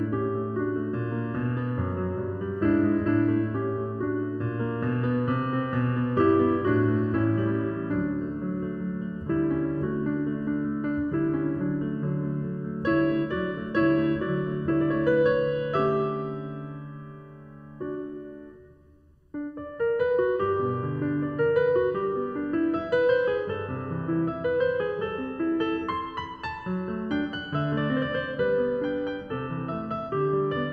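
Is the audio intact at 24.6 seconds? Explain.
No. At 24.6 seconds the music sounds hollow and phasey, with a thinned tone. This comes from channel delay (comb filtering), which runs through the whole clip rather than just this moment. One channel arrives a fraction of a millisecond late, and when the two are summed to mono, content common to both cancels at evenly spaced frequencies. The first notch falls near 700 Hz and the next around 2 kHz.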